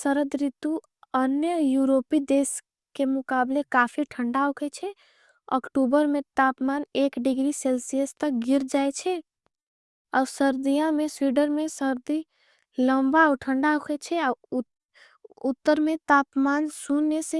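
No technical faults detected.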